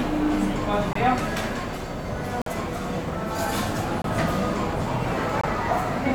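Four abrupt holes of silence cut into the sound, at 0.91 to 0.97 s, 2.42 to 2.50 s, 4.02 to 4.06 s and 5.41 to 5.49 s. Each drops out instantly and resumes on time. This is corrupt frame muted: damaged compressed frames were rejected by the decoder, and the player filled each gap with silence. The lengths fit runs of two to four lost frames.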